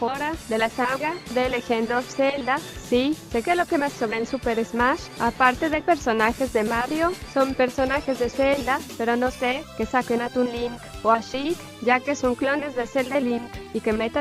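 No technical faults can be heard in the clip, so there are none to describe in time order.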